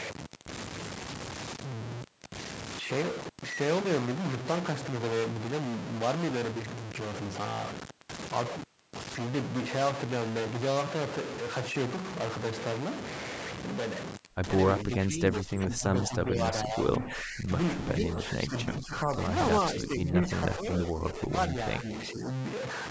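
From start to finish the speech carries a distortion that rides on the waveform itself, and the pauses between phrases fill with a gritty noise instead of falling silent. This is the sound of a stuck bit, most likely one data line or converter bit held at a fixed value. Roughly half the samples are pushed off by that bit's weight, and the error flips with the sign of quiet signals, which is why the gaps hiss.

From 14.84 to 17.5 s the speech sinks, with about two seconds of it dipped by up to about 15 dB. Shorter dips of about 10 dB follow at 17.99–19.17 s, 19.74–20.23 s and 20.56–22.28 s, where parts of the speech drop back or break up. This is speech suppressed in double talk, likely caused by an echo canceller that could not tell the near talker from the far side's loudspeaker echo and turned both down.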